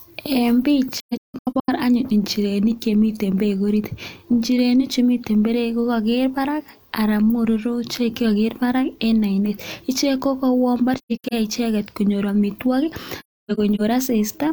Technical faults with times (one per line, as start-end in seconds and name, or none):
0.99-1.70 AAC frame loss with muting
10.96-11.34 AAC frame loss with muting
13.19-13.81 AAC frame loss with muting